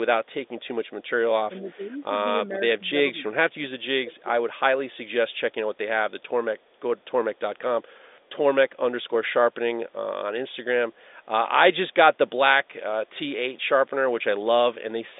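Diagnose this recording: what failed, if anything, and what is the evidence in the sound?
Echo leak, call processing stage: a delayed copy of speech returns at 0.86–0.9 s, 1.57–1.71 s, 5.3–5.54 s, 6.59–7.03 s, 7.36–7.59 s and 8.11–8.3 s, each time 427 ms behind its source. It sits about 40 dB under the speech, except at 1.57 s, where it rises to about 25 dB under. The likely cause is a loudspeaker-side echo canceller that failed to remove all of what its microphone picked up, so the residue was sent back down the line.

Speech suppressed in double talk, also in call processing: the speech dips in level between 1.48 and 3.57 s, about 1 s affected in total, with the deepest drop near 25 dB. It dips again at 4.05–4.28 s, around 0.2 s affected and down about 20 dB. The pattern points to the canceller's suppressor likely mistaking the local talker for loudspeaker echo while both were active, then turning both down. 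The telephone band is cut off near 3.8 kHz.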